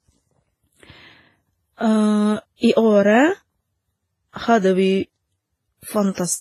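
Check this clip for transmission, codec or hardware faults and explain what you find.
There's one fault, running through the whole clip: transcoding between lossy codecs. Nothing comes through above 14.1 kHz, and two sets of artefacts sit on top of each other. It's likely a low-rate WMA encode, around 24 kbit/s, re-encoded to Vorbis near 25 kbit/s, with Vorbis spending bits on WMA's artefacts and adding its own.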